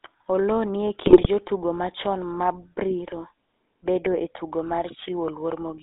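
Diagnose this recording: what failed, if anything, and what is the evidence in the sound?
Codec stage: GSM full-rate codec coding throughout, heard as a buzzy, gravelly roughness and a 250 Hz to 3.7 kHz band. This fits a 13 kbps pulse-excited vocal-tract model.

Radio link stage: GSM bit errors from 1.06 to 1.27 s, between "ni e" and "jotugo machon mabriro". Corrupted filter, pitch and gain parameters produce squawks and gargling across several frames.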